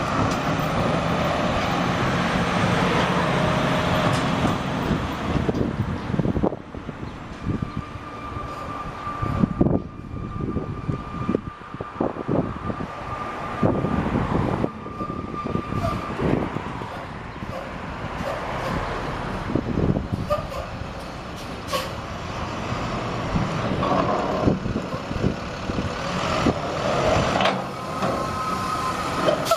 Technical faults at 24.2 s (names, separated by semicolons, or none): none